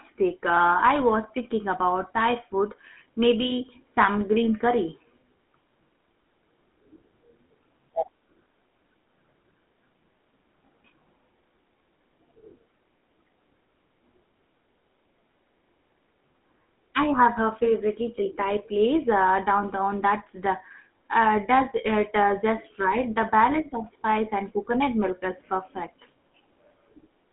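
From start to finish the speech carries the sound of the GSM full-rate codec, plainly audible throughout. The voice is reduced to a vocal-tract model excited by a regular pulse train, so it comes through with a buzzy, gravelly roughness instead of a clean tone. Nothing survives above roughly 3.4 kHz or below about 200 Hz, giving the narrow telephone-band quality, and the coarse rate fits a 13 kbps channel.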